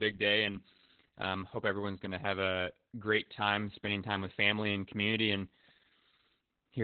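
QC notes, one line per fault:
Throughout, Opus voice compression: speech is narrowband, with nothing above 4.4 kHz, and sounds heavily muffled, hoarse and slightly robotic. This points to the SILK coder at about 8 kbps.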